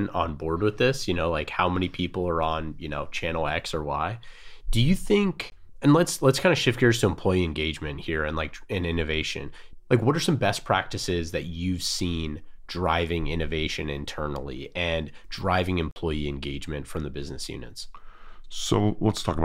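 A speech clip with two blocks of digital silence, where the audio drops straight to silence and back with no fade. The first, 5.50–5.52 s, is a 20 ms gap. The second, 15.91–15.96 s, between "and driving" and "engagement from the business", is a 48 ms hole. That's likely the output buffer not being filled in time.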